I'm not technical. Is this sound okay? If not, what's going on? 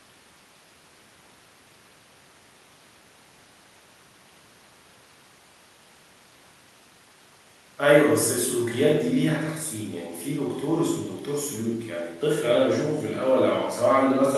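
Yes, nothing is wrong here.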